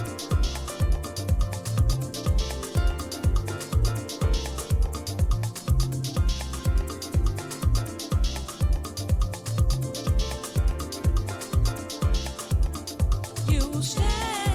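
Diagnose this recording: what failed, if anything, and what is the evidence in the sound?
Nothing in the signal chain seems to have failed here, since there's nothing in the sound that points to a fault at any stage of the recording or playback.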